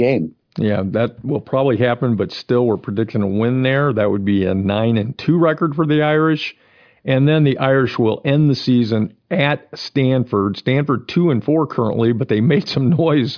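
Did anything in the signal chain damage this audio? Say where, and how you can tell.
No, nothing in the signal chain audibly damaged this speech recording. None of the stages from capture through to playback leaves any trace a listener can pick out.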